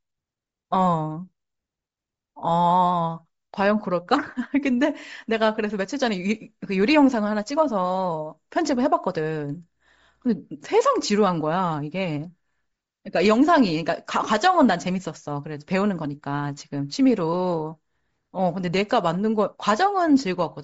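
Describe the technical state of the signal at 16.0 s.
At 16.0 s, as across the whole recording, the speech has likely passed through Bluetooth LC3 compression at a low bitrate, consistent with about 32 kbps in short 7.5 ms frames. Much of the upper spectrum is discarded and refilled with noise, giving the speech a plainly audible breathy, grainy edge.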